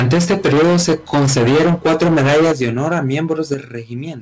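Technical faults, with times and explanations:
0.00–3.54 s, microphone overload: The loudest stretches crackle harshly. The waveform shows flat-topped peaks on roughly a third of samples, driven about 13 dB past full scale. This is likely from input volume set too high. On the spectrogram, the distortion appears as smeared energy up to the call path's 8 kHz limit.
2.52 s and 3.54 s, microphone volume stepped down: Voice and background drop together, first by about 10 dB, then about 8 dB. The waveform envelope shrinks in a sudden step each time. The call software likely lowered the input gain in response to clipping, and the crackle stops at the second step.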